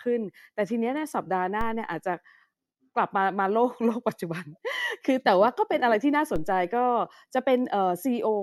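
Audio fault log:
1.61 s and 6.36 s: DC step. At each time the zero line of the speech waveform jumps by about -23 dBFS, then sinks back toward centre as a gentle 2 Hz high-pass bleeds it away over a few hundred milliseconds. The sudden jump is heard as a brief low thump while the speech carries on unchanged. On the waveform the trace lifts off centre and curves back. A spectrogram shows a thin broadband vertical line with energy bunched at the very bottom.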